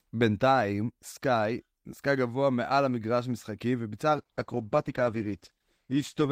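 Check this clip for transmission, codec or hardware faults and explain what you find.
One transmission fault is present: a call bitrate drop. At 4.15 s the speech turns coarse and muffled, and it stays that way until the clip ends at 6.31 s. The sound fits a fall from about 48 kbps to 13 kbps. The encoder had fewer bits, so it coded more roughly and lost the upper frequencies.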